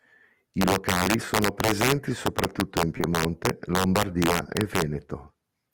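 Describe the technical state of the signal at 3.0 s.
At 3.0 s the signal shows short concealed packet loss: two back-to-back gaps, 2.97 to 3.01 s and 3.01 to 3.05 s, right after "sono presenti soprattutto in". Each time about 20 ms of audio failed to arrive, and the receiver filled the hole by extending the preceding sound before blending back into the real signal. The result is a brief smear or wobble. A plain dropout would instead leave silence, and a click would be a single sharp tick.

Integer overflow is also present across the whole clip, including this moment. The level is driven about 3 dB past the integer ceiling, so around one percent of samples exceed it and wrap to the opposite sign instead of being held at the limit. Every loud peak becomes a violent crack. That sets it apart from ordinary clipping, which flattens peaks into a duller, buzzy distortion rather than a full-range jump.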